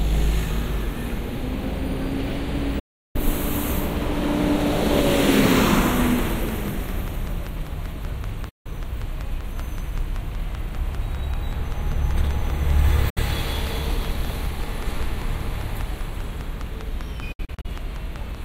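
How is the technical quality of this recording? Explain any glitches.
The recording has two kinds of fault: four digital broadcast dropouts and a long train of clicks.

Digital broadcast dropouts occur at 2.79 to 3.16 s, 8.49 to 8.66 s, 13.10 to 13.18 s and 17.32 to 17.66 s. The receiver stopped getting usable frames and muted its output until good data returned. Whatever was transmitted during those gaps is lost. Each hole opens and closes with a fade of about 8 ms, so the sound drops out quickly rather than being hacked off. The gaps last 352 ms, 160 ms and 64 ms, lengths that fit frames of about 32 ms. The last dropout is broken up: 160 ms of silence is spread over about 320 ms as several short holes, the longest 64 ms.

The train of clicks runs from 5.91 s to 18.36 s. Something was likely injecting a repeating pulse into the signal path, such as interference from nearby equipment or a faulty connection or power supply. 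The result is a steady, regular ticking at 5.15 clicks per second, about seventy clicks in all. The clicks peak about 5 dB above the sound. They are similar in shape, ride over the audio, and continue through its quieter stretches.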